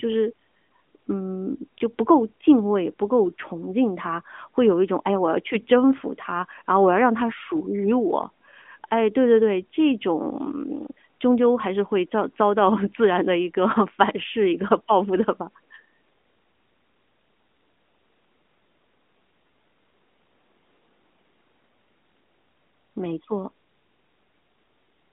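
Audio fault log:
No faults heard in this speech recording.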